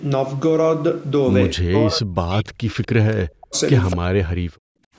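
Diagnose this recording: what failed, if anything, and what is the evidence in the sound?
The speech gets pushed down three times, at 1.55–2.77 s, 3.14–3.56 s and 3.94–4.47 s, sinking by roughly 40 dB at worst. That pattern points to the call's echo canceller, likely speech suppressed in double talk: it couldn't separate local talker from far-end echo and ducked everything.

Right near the end, 4.75–4.94 s, the room sound drops out for about 0.2 s, by about 29 dB. That's background gated by the echo canceller, still in call processing: the canceller clamped the microphone while the loudspeaker played, then released it.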